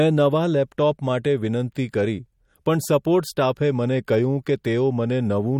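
Speech runs throughout with plainly audible MP3 compression damage, likely from encoding at a low bitrate that fits about 48 kbps. The encoder discards weak frequency lines that flicker in and out between frames, giving a watery, swirly texture and chirpy sibilants. On a spectrogram the energy stops sharply at 18.4 kHz, with scattered holes and speckled on-off patches in the upper bands. The waveform shows consonant attacks smeared.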